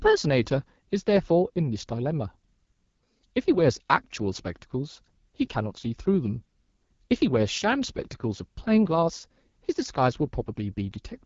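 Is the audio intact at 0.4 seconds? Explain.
No. At 0.4 s, as throughout the clip, the speech carries AMR wideband (HD Voice) codec damage. The codec models the voice below 6.4 kHz with a pulse-excited vocal tract filter and fills 6.4 to 7 kHz with shaped noise. Plainly audible roughness points to a low rate such as 8.85 kbit/s. On a spectrogram, harmonics smear into noise, the top band looks hissy and unstructured, and nothing appears above about 7.5 kHz.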